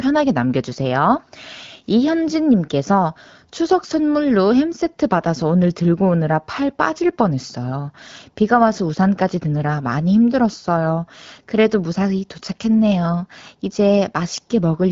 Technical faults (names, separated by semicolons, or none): none